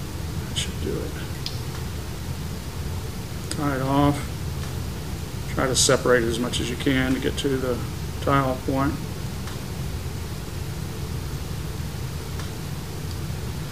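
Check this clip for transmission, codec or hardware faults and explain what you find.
One fault runs through the whole clip: low bit depth without dither. The likely cause is the audio being reduced to about 6 bits and truncated, with no dither to decorrelate the rounding. With so few steps, the error tracks the signal itself, leaving the distortion only around 20 dB below the sound. Quiet passages turn gritty, material smaller than one step drops out or sputters between levels, and dense audio takes on a grainy, near-steady hiss.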